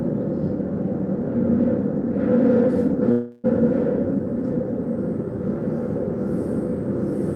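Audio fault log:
3.11–3.46 s, call audio freeze: the sound stalls and the final moment before the break is drawn out as a fading buzz or hiss for about 325 ms, never dropping to silence. Packets were likely held up in transit, leaving the receiver's jitter buffer empty so it had to fill the wait itself. When the flow returns, the audio picks up exactly where it stopped, with nothing lost, but everything afterwards runs about 325 ms late.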